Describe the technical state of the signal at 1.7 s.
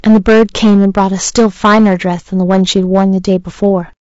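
At 1.7 s, as throughout the clip, the speech is driven about 11 dB past the converter's limit, so around 7 percent of samples are flattened by hard clipping, giving harsh fuzz on every loud syllable. The same moment sounds rough and grainy, with noise between harmonics and a lowered or synthetic top band, likely from low-delay AAC compression (AAC-ELD) at a rate near 32 kbps.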